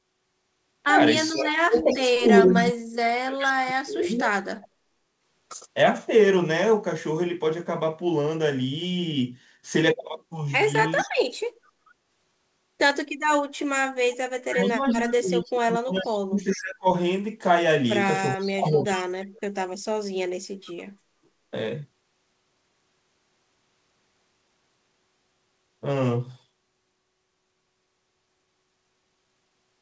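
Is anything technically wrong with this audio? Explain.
Yes. The speech is suppressed during double talk from 1.3 to 4.93 s, 11.16 to 11.43 s and 14.42 to 19.66 s. It dips by up to about 40 dB in broken pieces, likely because an echo canceller ducked the whole line. Unlike dropouts, these dips follow the other side's activity.

There is also an echo leak at 1.78 to 3.51 s, 10.99 to 11.91 s, 15.98 to 16.59 s and 18.42 to 19.01 s. A copy of the talker arrives 439 ms late, about 10 to 20 dB down, likely because loudspeaker pickup escaped cancellation. The fixed delay distinguishes it from room reverberation. The G.722 band-limit near 8 kHz is present throughout.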